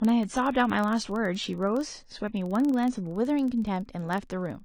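From 0.0 to 3.15 s the speech plays from an adaptive stream starting at a low bitrate: the treble is missing, a hard spectrogram ceiling, until quality abruptly improves without any gap. Throughout, a filter restarted on every block adds a level-following 21.5 Hz buzz, which fits a 2048-sample block, visible as regularly spaced waveform ticks.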